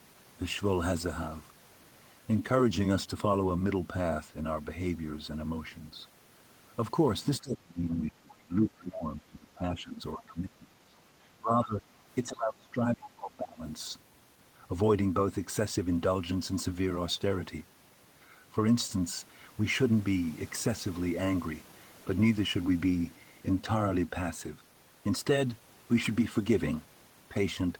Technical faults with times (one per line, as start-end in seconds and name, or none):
7.41-10.97 speech suppressed in double talk
10.22-10.34 other side's voice leaking through
11.39-11.84 speech suppressed in double talk
12.23-13.63 speech suppressed in double talk